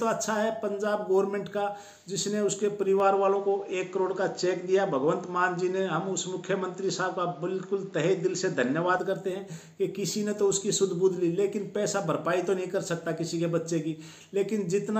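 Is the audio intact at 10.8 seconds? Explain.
Yes, the audio is intact at 10.8 seconds, with no fault at that point.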